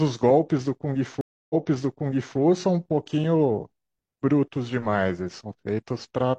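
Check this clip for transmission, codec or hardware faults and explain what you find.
One transmission fault is present: a stream reconnect between 1.21 and 2.38 s. The speech drops into silence for 287 ms as the connection breaks. When the player reconnects and starts a fresh decoder, playback resumes 0.88 s earlier, so a stretch of speech is heard twice, and it restarts with a fade-in. That repeat sets it apart from an ordinary dropout or packet-loss gap, where the speech would continue from a later point.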